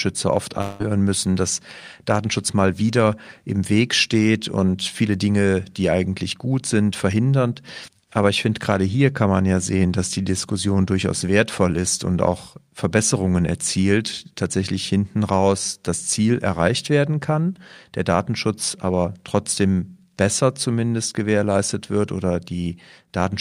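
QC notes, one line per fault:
0.61–0.83 s, long network dropout: for about 0.2 s the sound is replaced by a smeared, fading continuation of what came just before, a buzzy tail with no new detail, and the audio then resumes further on with about 0.18 s of material missing. This is likely a stream interruption that the receiver papered over by extending the last sound. Unlike a single lost packet, the gap is long enough to hear the fill decay. It never falls to full silence, and content is skipped rather than paused.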